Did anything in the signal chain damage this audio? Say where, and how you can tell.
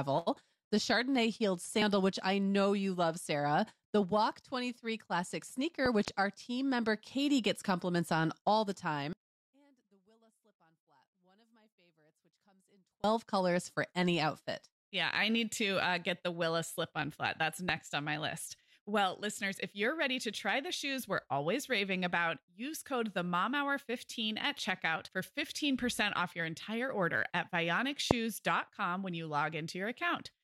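Yes. Loud pops sit on top of the speech. Two come in quick succession between 5.86 and 6.10 s, about 15 dB above the signal. Single pops hit at 17.7 s, before "on my list", and 28.1 s, after "your entire order at", about 20 and 25 dB. Speech continues underneath. These are likely voltage pulses from the analogue wiring or a driver glitch.

One channel inverted from 9.13 to 13.04 s, between "compliments on all the" and "colors for any outfit". Summed to mono, the level drops by about 37 dB. The centred voice cancels, leaving only a faint difference signal. A reversed-polarity connection in the analogue wiring is the likely cause.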